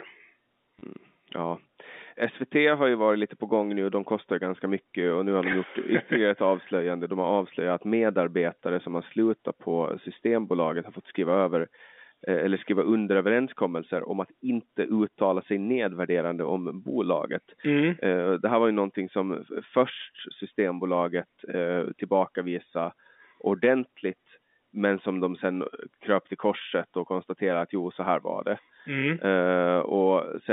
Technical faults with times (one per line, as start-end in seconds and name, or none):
0.79-0.81 packet loss with last packet repeated
5.52 packet loss with last packet repeated